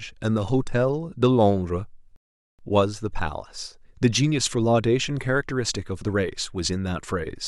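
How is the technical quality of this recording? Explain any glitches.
The speech halts once and picks up again. From 2.16 s to 2.59 s it drops to silence for about 0.43 s, then continues from exactly where it broke off, with nothing skipped. That is a rebuffering stall: playback ran out of downloaded audio and waited for more to arrive, adding dead time without losing any sound.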